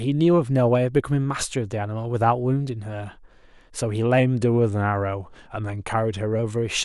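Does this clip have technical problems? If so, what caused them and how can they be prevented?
Yes. From 4.20 s to 6.39 s the speech suddenly slows by 5.25% and drops 93 cents in pitch, almost a semitone. It sounds flat and dragged for about two seconds before returning to its normal rate. This is likely a drift correction step, where software matching two clocks changed the playback rate in a single jump to rebalance its buffer. To prevent it, have the resampler correct clock drift in small, continuous adjustments rather than abrupt steps.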